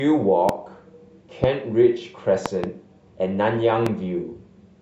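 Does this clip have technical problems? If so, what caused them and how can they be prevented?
Yes. The speech is interrupted by loud pops at 0.49–0.51 s, 1.44–1.46 s and 3.86–3.89 s, with a double pop between 2.46 and 2.66 s. Each peaks roughly 15 dB above the speech, which carries on underneath. The likely cause is a sudden voltage pulse, from static, a switch, a loose plug or a driver glitch, that the later circuits turn into a sharp thump. Secure the connectors, ground the equipment, and keep the audio drivers up to date.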